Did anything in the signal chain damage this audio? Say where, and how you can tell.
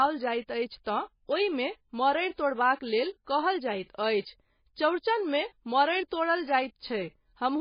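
Yes. Throughout, the speech sounds watery and swirly with nothing above 5.1 kHz. Likely heavy MP3 compression at the codec stage, bit-starved near 18 kbps.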